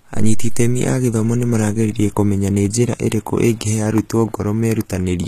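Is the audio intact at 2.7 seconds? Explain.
No. At 2.7 s, as throughout, the speech shows likely HE-AAC compression at a low bitrate near 20 kbps: copied-up treble replaces the originals, leaving s sounds gritty and metallic, with a cutoff at 14.9 kHz.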